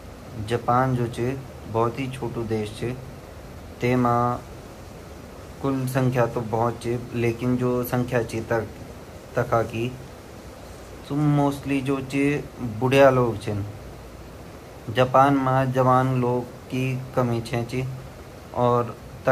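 No technical faults detected.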